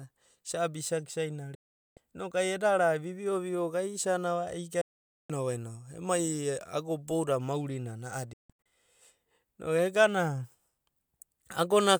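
The speech cuts abruptly to silence from 1.55 to 1.97 s, again from 4.81 to 5.30 s, and in several short holes between 8.33 and 8.66 s, the longest about 160 ms. This is digital broadcast dropout: the receiver muted with a 3 ms fade while frames were lost or failed their checksum, so that audio is lost.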